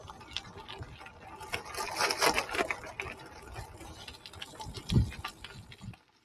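The audio runs through a noise suppressor applied to music or sounds, one built for speech. It stays active from start to finish. It treats sustained tones and ambience as noise and pulls them down. The level swings by around 10 dB as it does. Onsets pass almost intact. Held parts and tails sag behind them. The result pumps and flutters, and the body of the sound thins out between attacks. At the very end, from 5.96 s to 6.24 s, there is a sound cut by the noise suppressor. For roughly a third of a second, this final stretch is pushed down harder than the rest, by about 6 dB at its deepest. The suppressor reads it as noise.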